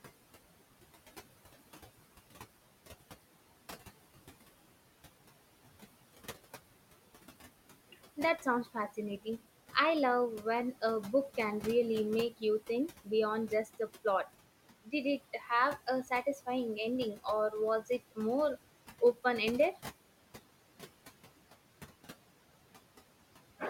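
Noise suppressor artifacts run through the whole clip. The suppressor pulls down about 17 dB in every band it treats as steady noise. The room noise, about 15 dB under the speech, sinks in the gaps and swells back under speech.

Speech cut by the noise suppressor comes at 14.84–14.93 s, 15.33–15.5 s, 16.04–16.47 s and 17.86–18.18 s. The suppressor mistook quiet speech for noise. It dipped about 17 dB, 8 dB, 8 dB and 16 dB. Each time, roughly a tenth of a second sounds swallowed.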